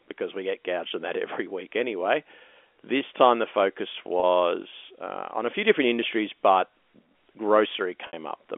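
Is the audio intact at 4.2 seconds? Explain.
No. Just after "time the focus", from 4.20 to 4.23 s, there is packet loss with pitch repetition: about 30 ms of audio went missing, which fits a single lost packet, and the receiver filled the hole by looping the last pitch cycle it had. The result is a brief held, slightly buzzy sustain rather than silence. That sets it apart from a plain dropout, which would leave an audible gap or click where the signal stops.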